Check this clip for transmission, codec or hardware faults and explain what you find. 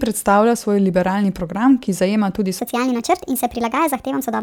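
One fault is present: a section at the wrong speed. From 2.59 s to 4.43 s, the speech plays 1.38 times too fast. Pitch jumps up about five semitones with it. The speech turns high and hurried. This was likely caused by playback against the wrong clock.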